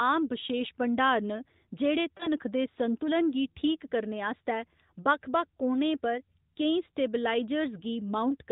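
At 2.18 to 2.28 s, just before "दे संतुलन गी", there is a lost AMR speech frame. The decoder briefly patches the gap with a dip and warble, consistent with one missing 20 ms frame, all within AMR narrowband sound that stops at 4 kHz.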